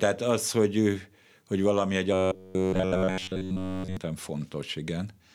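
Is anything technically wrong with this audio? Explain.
Yes. From 2.13 to 3.97 s, just after "hogy valami egy", the speech becomes a rigid metallic buzz near 94 Hz, robotic sound from repeated short buffers, likely looping roughly 11 ms chunks while new audio arrives late.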